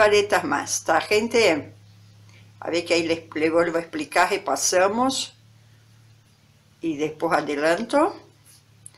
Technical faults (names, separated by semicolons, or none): hard clipping